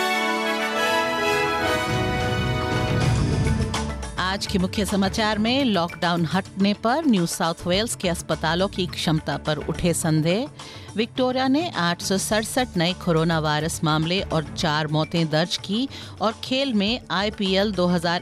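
Nothing technically wrong can be heard anywhere in this audio. No fault stands out at any point, so there is no time or cause to report.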